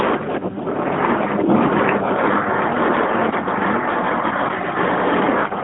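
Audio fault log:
Nothing to flag here: the speech comes over a narrowband mobile line, band-limited to about 250 Hz to 3.5 kHz, and there's no fault to log.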